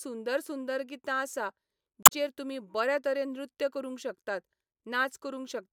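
A speech clip with damaged data in the compressed stream from 2.03 to 2.12 s, between "सुंदर गितां आसा" and "तुमी बऱ्या तरेन नृत्य". The decoder misreads corrupted frames there, loses sync and searches for the next frame header.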